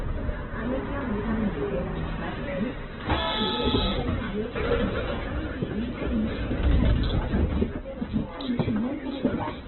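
Throughout, the sound is band-limited with nothing above 4.1 kHz, and tonal parts come out rough, grainy and noisy rather than swirling. This is likely Opus compression in its CELT music mode, with heavy damage that points to a very low bitrate near 8 kbps.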